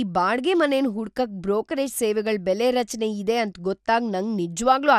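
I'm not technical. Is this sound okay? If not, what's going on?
No. The speech sounds dull and gurgly from start to finish, likely MP2 compression; unlike simple muffling, the treble keeps flickering in and out with a grainy swirl.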